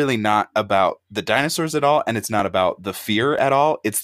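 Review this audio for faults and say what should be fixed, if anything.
Overlap between stream segments at 2.39 s and 3.39 s: overlapping timestamps on 1 s segments make the player discard real speech, so the waveform jumps, unlike a dropout's silent gap. Fix by aligning segment timestamps so consecutive segments never overlap.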